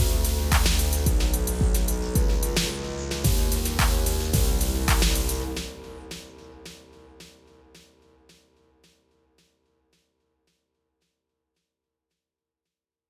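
No technical faults can be heard anywhere in this recording of sounds. There is nothing in it that needs a timestamp or further comment.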